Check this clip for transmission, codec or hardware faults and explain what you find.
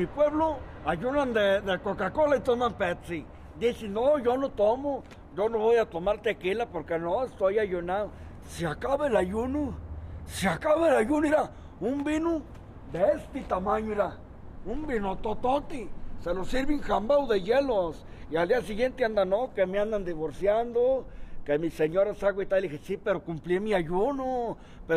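No faults turn up in this clip.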